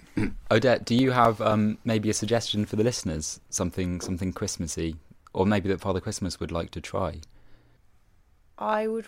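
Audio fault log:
0.47–2.82 s, CD scratch ticks: a surface blemish wipes out more data than error correction can rebuild on each disc revolution, so the player interpolates or mutes those samples, leaving ten regular ticks in the speech, about four per second, the longest about 4 ms.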